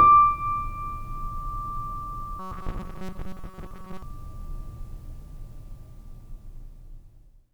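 From 2.39 to 4.03 s the music becomes robotic sound from repeated short buffers, a metallic buzz at 188 Hz. Late-arriving audio was likely covered by looping chunks of about 5 ms for most of it. A spectrogram shows rigid 188 Hz harmonic stripes; the waveform shows identical repeating cycles.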